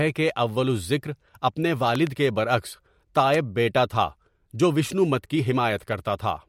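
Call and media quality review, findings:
Loud pop: double pop 1.95–2.09 s, roughly 10 dB above the speech; single pop 3.34–3.36 s, roughly 15 dB above. Likely voltage transient from plug, switch, static or driver glitch, shaped by downstream circuitry. Speech continues underneath, no gap, unlike a dropout.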